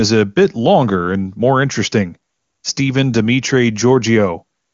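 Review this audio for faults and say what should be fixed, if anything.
Nothing here needs fixing: the speech comes through the AMR wideband (HD Voice) path with content stopping at about 7.2 kHz, and there is no audible roughness or rasp, which fits the codec running at its highest rate of around 23.85 kbit/s.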